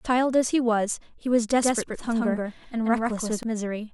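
From 1.63 s to 3.43 s the speech suddenly doubles: a second, equally loud copy trails around 150 ms behind, dry and full-band, cutting in and out abruptly. This doubled audio track likely comes from a slower second capture path or misaligned edit.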